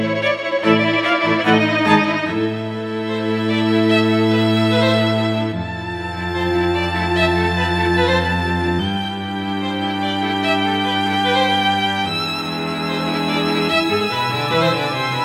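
No technical faults can be heard anywhere in the audio, and the signal stays steady and intact for its whole duration.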